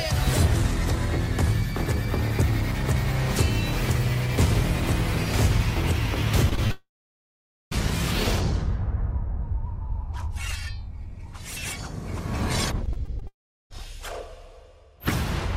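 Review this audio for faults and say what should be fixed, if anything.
Short concealed packet loss at 6.49, 6.55 and 6.67 s: three bursts, each about 40 ms long, in which roughly 20 ms of audio did not reach the decoder in time. Each time the receiver bridged the hole by extending the preceding sound and then blending back into the real signal. The result is a quick run of small smears or wobbles, and a brief sound element could disappear inside one of the patches.

Long network dropout at 6.71 to 7.73 s and at 13.27 to 13.75 s: the sound turns into a fading continuation of itself and then goes quiet. In the first case about 0.83 s of that second is silent, and in the second about 0.38 s is silent. The likely cause is a stretch in which no audio arrived, about 1 s in the first case and about 0.44 s in the second. Playback then resumes further along without the missing part.

Repeated packet loss (robotic sound) from 12.86 to 13.81 s: six separate holes, the longest 22 ms, together make up about 9% of the span. 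Each one is patched by extending the last sound, and the next follows soon after, so the passage sounds choppy, with fragments missing. The second long dropout falls inside this stretch.

To prevent these faults, stabilise the network path and use a larger adaptive jitter buffer with forward error correction or redundancy, so that late and lost packets are recovered rather than concealed.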